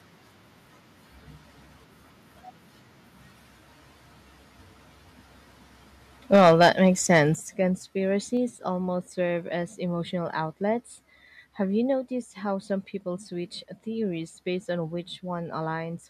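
The microphone input gain was likely set too high, driving the converter past full scale from 6.33 to 6.69 s. Peaks overshoot by about 7 dB and around 7 percent of samples are flattened, so the loudest syllables get a harsh, crackling edge. At 6.36 s, just inside that burst, the call software likely reacted by stepping the microphone volume down by 3 dB, and the speech and background drop together in one abrupt step. From 7.15 to 7.17 s the input likely overloads again. It is a brief overshoot of about 2 dB, clipping a few percent of samples and giving a short gritty crack. At 7.35 s a second step-down, likely the software responding to that peak, cuts the level by 8 dB, a sudden fall in loudness. A third, smaller reduction of 2 dB follows at 8.37 s, likely from the same automatic gain logic, just before "almost serve as emotional", leaving that phrase quieter than the speech before it.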